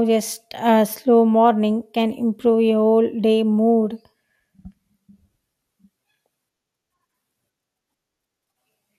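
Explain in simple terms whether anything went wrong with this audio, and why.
Something did go wrong, from 6.12 to 6.58 s. The speech is disturbed by short burbling blips of noise. This is DAB burbling. Weak digital radio reception let errors slip past the error correction, so short blips of noise crept into parts of the sound.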